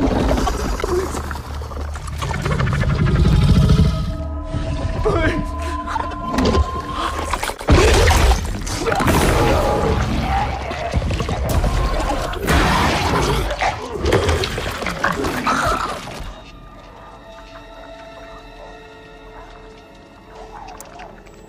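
Four short stretches of the audio break into a garbled flutter, at 0.47 to 0.70 s, 5.95 to 6.13 s, 10.71 to 10.94 s and 11.93 to 12.11 s. These are frames out of order: two adjacent blocks were swapped before decoding, so each stretch plays with its halves exchanged. The blocks are 104.5 ms in the first and third cases and 78.4 ms in the second and fourth, which points to runs of four and three codec frames. Nothing is lost in time, only rearranged. There are also two sharp ticks, at 0.81 s and 3.32 s. Each is a block of digital silence, where the signal drops abruptly to silence and returns with no fade, about 10 ms and 5 ms long respectively. At these lengths they register as clicks rather than audible holes, and the likely cause is an output buffer that was not filled in time.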